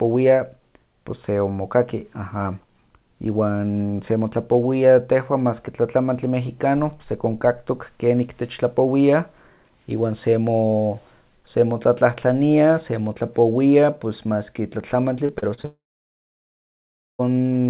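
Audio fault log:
15.26–15.65 s: repeated packet loss (robotic sound). Right after "maski tlatlamantli" the speech turns choppy. Four short holes open in under half a second, the longest about 35 ms. Each one is patched by stretching the last bit of sound. About 28% of this stretch is patched material. The next gap comes before the speech can settle, so it stutters.
15.65–17.21 s: long network dropout. The choppiness gives way to a brief fading buzz as the last sound is carried on. Then roughly 1.4 s of near silence follows. Close to 1.5 s of audio never arrives. This is likely a network outage rather than a gap in the speech itself. The speech resumes near the end with the lost part simply missing. Throughout, the narrow call codec band tops out at 4 kHz.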